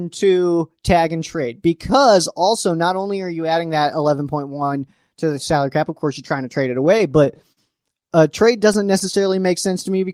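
From 6.85 to 7.59 s the speech has repeated stalls (stutter). Packets arrived late, the jitter buffer emptied six times, and the receiver held the last sound for about 94 ms in total, the longest hold about 45 ms. It drags and catches rather than dropping out, because nothing is lost. A second stretch from 8.07 to 9.15 s has nine shorter stalls, none over 12 ms, adding about 83 ms.

From 9.18 to 10.06 s a jitter buffer slow-down follows. To rebuild its reserve, the receiver repeated single pitch periods or bits of pauses, adding 68 ms and running this stretch at 93% speed with the pitch unchanged. Unlike the stutter, the delivery here is simply slowed and drawn out.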